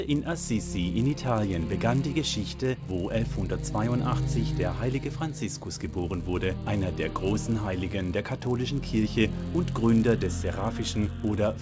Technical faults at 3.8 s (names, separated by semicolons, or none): resampler restarted on every block